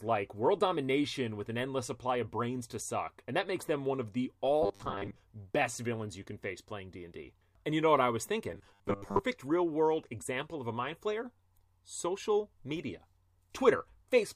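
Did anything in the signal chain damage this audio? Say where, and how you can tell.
Yes. Robotic sound from repeated short buffers at 4.63–5.17 s (after "them one of the") and 8.52–9.21 s: a rigid 100 Hz buzz, likely buffer underruns looping 10 ms blocks.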